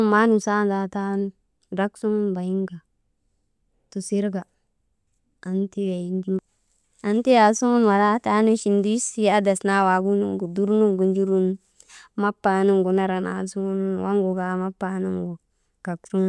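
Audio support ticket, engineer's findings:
Listened through the speech recording and nothing stood out, so there's no fault to log from my end.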